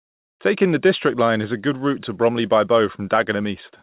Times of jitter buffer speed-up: none

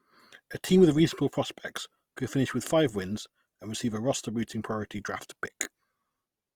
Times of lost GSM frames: none

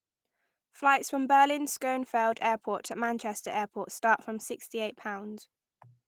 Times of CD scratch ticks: none

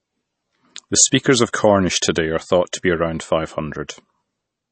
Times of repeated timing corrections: none

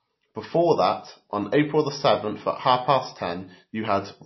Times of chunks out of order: none

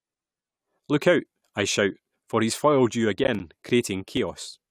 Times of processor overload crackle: 3.19-3.40

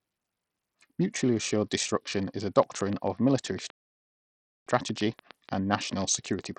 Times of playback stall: 3.70-4.67

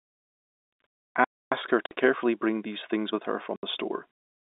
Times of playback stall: 1.24-1.52

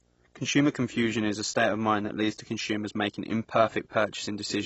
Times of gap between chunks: none

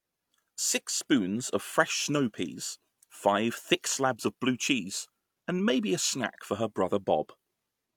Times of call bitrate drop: none

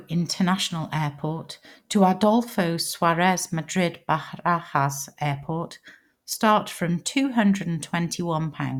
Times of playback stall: none

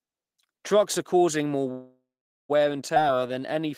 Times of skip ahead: 2.95-2.98

